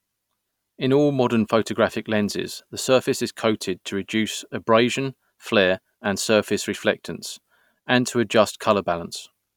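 No technical faults can be heard anywhere in this recording of speech.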